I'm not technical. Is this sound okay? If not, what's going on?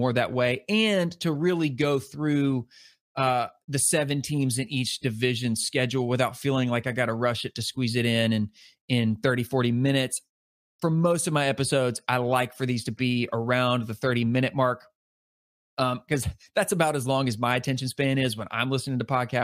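Yes, nothing stood out as a problem on listening to this recording.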